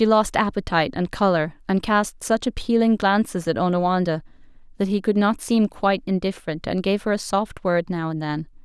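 Nothing stood out on listening to this speech recording.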